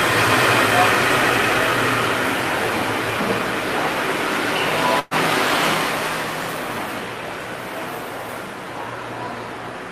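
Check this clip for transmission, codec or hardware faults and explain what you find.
One fault: a burst of packet loss at 4.99 to 5.14 s. Several packets in a row failed to arrive in time, and the receiver covered the hole by extending the last received sound for about 115 ms while lowering its level, so a held, fading sound replaces the audio. When playback resumes, about 120 ms of material is gone, with no silent gap. On a spectrogram, a frozen, smeared spectrum tapers off, then content restarts abruptly. The waveform shows a decaying envelope.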